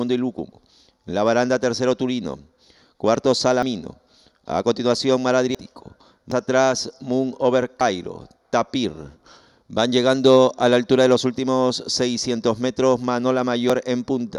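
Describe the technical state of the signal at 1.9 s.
At 1.9 s the signal is intact, with no dropout, distortion, glitch or other technical fault.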